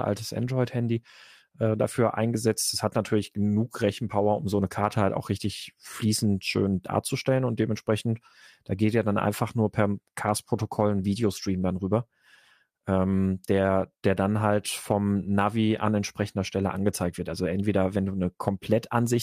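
No technical faults occur anywhere in the recording, so there is nothing to describe in time order.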